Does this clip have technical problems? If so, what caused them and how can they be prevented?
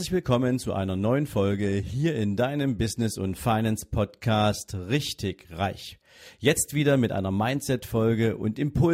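No, no technical faults are audible anywhere in this speech clip, so nothing needs preventing.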